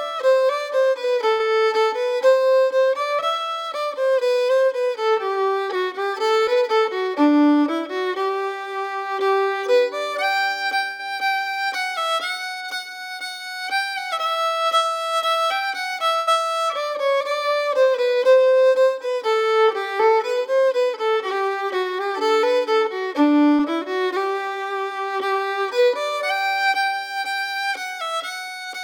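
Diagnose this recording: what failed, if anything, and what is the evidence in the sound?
Held, fading sound for about 80 ms at 1.31, 10.91 and 16.19 s, then a jump ahead: network burst of packet loss, with the last sound extended over the gap.

Brief smears of about 40 ms at 6.43 and 23.55 s: short concealed packet loss on the network, the decoder filling the hole before blending back.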